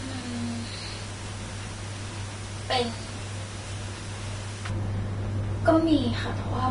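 From the start to about 4.70 s there's pre-emphasis left on: the treble boost meant to be undone on playback was never reversed, so the highs sit about 11 dB hotter at 10 kHz than at 1 kHz, a tilt that fits a J.17 curve. For that stretch the speech comes across thin, bright and sibilant, and then settles into a more natural balance for the remaining couple of seconds.

Underneath, across the whole clip, there's plainly audible damage that is likely Vorbis compression at a low setting, something around 31 kbps. Nothing comes through above about 10.5 kHz, and the upper range that does survive has been quantised so coarsely that its detail turns into noise of similar energy. You hear that as a hissy, grainy layer, roughened tones and softened attacks.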